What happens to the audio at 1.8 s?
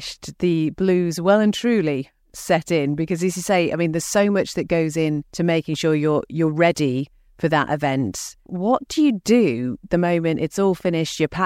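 Nothing goes wrong at 1.8 s: the speech carries on intact through that moment, with no dropout, click, distortion or other audible fault.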